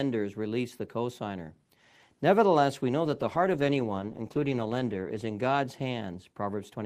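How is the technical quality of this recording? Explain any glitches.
The recording has one clear glitch, a call bitrate drop from around the middle. From 3.06 s to 6.15 s the connection's bandwidth estimate fell and the encoder was forced to spend far fewer bits, which fits a drop from about 32 to 13 kbps, bottoming out for 2.02 s. Coarser coding leaves the speech rough and watery until quality recovers.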